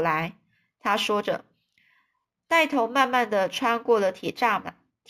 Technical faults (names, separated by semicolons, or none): imaging from linear upsampling